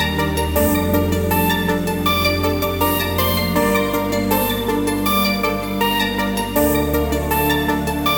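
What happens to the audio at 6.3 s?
Nothing goes wrong at 6.3 s: the music plays through that moment intact, with no dropout, click, distortion or other audible fault.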